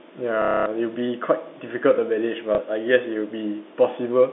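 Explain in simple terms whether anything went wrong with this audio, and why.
Parts of the signal went missing on the way, a fault called packet loss with last packet repeated. Each time, the receiver filled the gap by replaying the last piece it had. From 0.42 to 0.66 s this gives a quarter-second robotic buzz, which fits about eight lost 30-millisecond packets. At 2.55 s there is a much briefer blip from a single lost piece. The sound comes through a telephone line using G.711 telephone coding.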